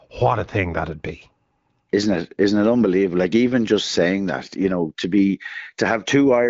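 No technical faults can be heard at any point in the speech, which comes through the AMR wideband (HD Voice) codec at 15.85 kbit/s.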